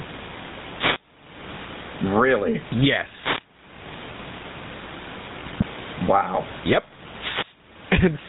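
Gain pumping runs through the whole clip: the gain swings by around 25 dB, and the room background sits about 38 dB below the speech. The likely cause is input gain set far too high, with a fast limiter clamping down on every peak and squashing loud and quiet passages together.

GSM full-rate coding is also present from start to finish, and its damage is plainly audible. The speech carries a buzzy, gravelly roughness and nothing above 4 kHz, which fits the 13 kbps full-rate coder: a vocal-tract model excited by a sparse, regularly spaced pulse train.

A wireless microphone noise hit comes at 3.20 to 3.45 s, a short swish of static over the speech. The FM radio link faded as reflected signals cancelled one another, so receiver noise rose.

GSM bit errors follow at 5.44 to 5.65 s, where the speech breaks into squawks and gargling. Corrupted filter, pitch and gain parameters bent the spectrum and level frame by frame, which points to roughly ten damaged frames on a weak link.

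A second wireless microphone noise hit at 7.18 to 7.59 s repeats the effect for longer, with another burst of static.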